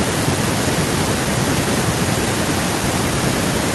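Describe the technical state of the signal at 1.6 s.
At 1.6 s the signal is intact, with no technical fault present at that moment.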